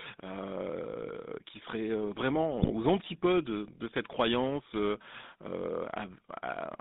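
From the start the speech carries the GSM full-rate codec: the band is held to roughly 150 Hz to 3.7 kHz, and the voice has a plainly audible buzzy, gravelly grain. That grain comes from rebuilding the voice from a vocal-tract filter fed by sparse, evenly spaced pulses, which fits the 13 kbps full-rate coder. A plain telephone band-limit would sound muffled but smooth. Here the roughness is in the texture of the voice itself.

Between 2.56 and 2.72 s, GSM bit errors break in. Over about 160 ms the voice turns to squawks, pops and gargling, with sudden shifts in level and tone. The damage points to roughly seven corrupted 20 ms frames. Flipped bits in the filter, pitch and gain values decode into wrong spectra and wrong levels. Ordinary dropouts would leave gaps or smeared repeats. These errors add harsh new sounds.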